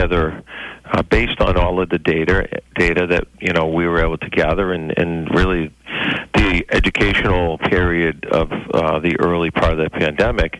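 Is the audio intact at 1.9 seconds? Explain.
Yes, at 1.9 seconds the audio plays through intact, with no dropout, click, distortion or other fault at that moment.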